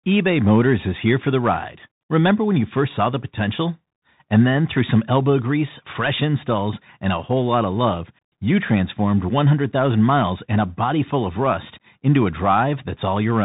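Bluetooth CVSD headset codec damage runs from start to finish, and it is plainly audible. The speech was squeezed through a one-bit delta coder that only signals up or down at each step, with the step size adapting, which fits the 64 kbps CVSD stream of a headset link. Nothing above 4 kHz survives, so the voice sounds boxed and narrow. Sibilants come out scratchy, louder bright passages smear and distort where the step cannot keep pace, and a grainy hiss sits beneath everything.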